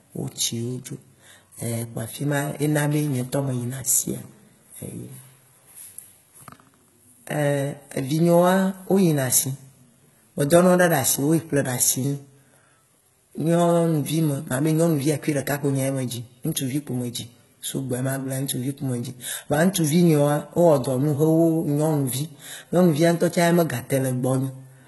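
HE-AAC compression, heard throughout this speech clip, likely comes from heavy coding at a low bitrate that fits about 16 kbps. Nothing sounds above 11.8 kHz. The treble is rebuilt by copying lower bands upward under a coarse envelope, so its harmonics misalign and s sounds turn gritty and lispy.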